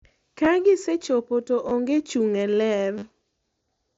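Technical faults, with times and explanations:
0.45 s, 1.69–1.71 s and 2.98–3.02 s, repeated buffer: three brief glitches, each a short buzzy stutter with a hard click at every join, longer each time. The same tiny slice plays again once, then twice, then four times. The repeat length fits a 10 ms buffer. When fresh audio arrived late, the device replayed its last buffer, and the speech that should have filled that gap was lost, roughly 40 ms in the last event. The mSBC headset path leaves nothing above 7.7 kHz throughout.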